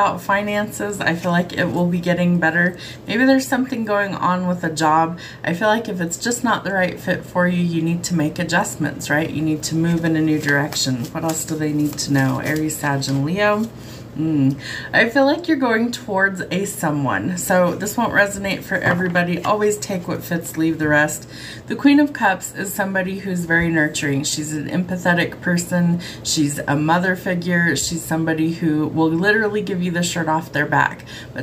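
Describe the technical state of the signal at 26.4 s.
At 26.37 s there's a bit error spike: a single flipped bit throws one sample off by a power of two, giving one sharp, broadband tick.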